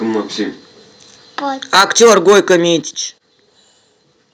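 From 1.73 to 2.56 s the microphone's input was likely set too high, causing microphone overload: peaks ran about 11 dB past the converter's limit, so roughly a tenth of the samples were flattened into a harsh crackle. At 1.81 s and again at 2.82 s, the call software likely turned the microphone volume down in single steps, so speech and background drop abruptly by about 4 dB and then about 8 dB.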